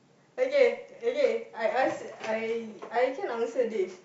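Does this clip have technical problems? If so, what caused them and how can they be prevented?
No, there are no technical problems in this clip.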